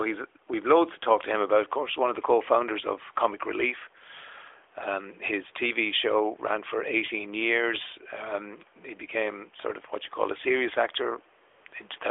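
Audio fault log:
11.50–11.66 s and 11.68–11.72 s, AMR comfort noise. The phone judged the talker silent and stopped sending speech frames, for 160 ms and then 40 ms. The receiver filled both gaps with steady synthetic noise, so the real room background is replaced and switches in and out.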